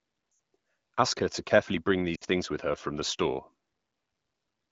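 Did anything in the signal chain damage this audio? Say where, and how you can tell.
Yes. The damage happened on the radio link, as lost AMR speech frames. There are two short holes. The first runs from 0.31 to 0.39 s, about 80 ms, which fits four 20 ms frames. The second runs from 2.15 to 2.24 s, about 60 ms, between "her to carefully bring" and "things with her from". The decoder reuses the last good pitch and vocal-tract settings at falling gain. The sound smears briefly, then sinks quickly toward silence.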